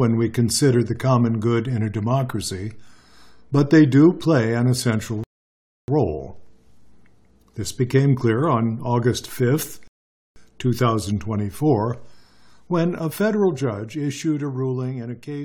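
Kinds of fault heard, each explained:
Rebuffering stall: the player drained its store of downloaded audio faster than new data arrived, so playback halted until enough had come in to continue. In this clip the sound drops to silence twice, from 5.24 to 5.88 s and from 9.88 to 10.36 s, adding about 0.64 s and 0.49 s of dead air. Each time it picks up at exactly the point where it stopped, so nothing is skipped; the clip just runs longer.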